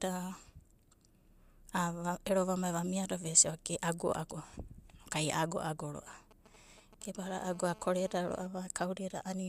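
From 6.07 to 7.27 s come GSM signalling bursts: a nearby 2G phone's intermittent radio bursts are rectified by the audio circuit into a galloping dit-dit-dit of short 217 Hz buzzes, roughly 20 dB below the speech. The broken, rhythmic grouping separates it from a continuous buzz.

At 7.27 s this turns into GSM phone buzz, lasting until 8.47 s. The phone is now transmitting steadily, as in a call, so the rectified pulses form an unbroken, raspy 217 Hz buzz rich in harmonics, about 22 dB below the speech. Unlike mains hum, it is harsh and unrelated to the speech.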